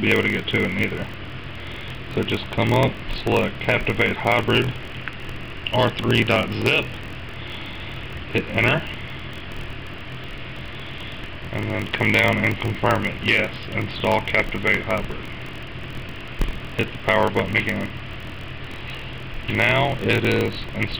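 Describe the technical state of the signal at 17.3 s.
At 17.3 s the signal has a block size mismatch (padded), which runs through the whole clip. One stage delivers blocks slightly shorter than the next stage reads, and each block's shortfall is filled with zeros. The 43.1 Hz repetition fits a 1024-sample read block at 44.1 kHz. The resulting tiny silent gaps produce a steady 43.1 Hz buzz. The audio also runs slow, at 0.938 times normal speed, while keeping roughly its normal pitch.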